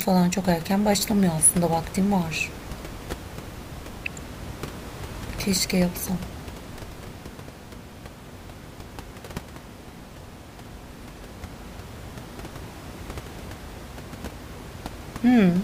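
The speech signal carries no technical faults, with only the room's own background noise sitting about 16 dB below the speech as part of the recording.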